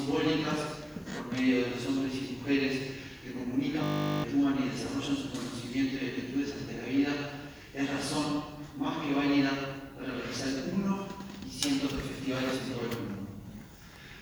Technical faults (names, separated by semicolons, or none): system hang loop